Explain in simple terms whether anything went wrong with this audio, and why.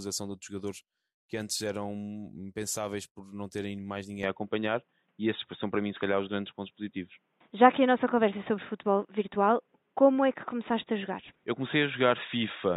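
Input switched to a poorer device at about 4.23 s, right after "não terem mais ninguém", and the rest of the speech stays that way to the end. With no gap at the switch, the sound abruptly turns dull and boxy, with nothing above 3.8 kHz, and becomes a bit louder, with a faint new background hiss underneath. The likely cause is the recording system changing its input partway through to another microphone or a headset's call mode, which passes a narrower range of sound.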